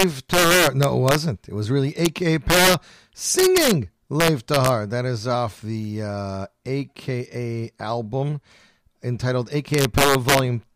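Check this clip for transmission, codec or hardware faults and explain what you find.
The speech has one kind of fault, integer overflow, which sounds like sharp cracks on the loudest peaks, more abrupt than clipping. It occurs at 0.00–1.15 s, at 2.05 s just after "was really", and at 2.50–2.74, 3.39–3.71, 4.20–4.69 and 9.74–10.39 s. Level was pushed about 1 to 6 dB past the integer ceiling, so peaks wrapped to the opposite sign instead of being limited.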